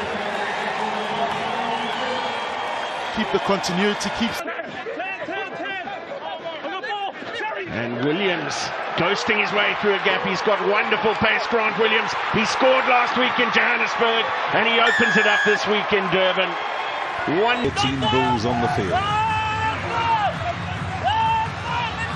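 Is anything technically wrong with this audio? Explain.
No, the signal holds steady throughout, with nothing in it that points to a technical fault.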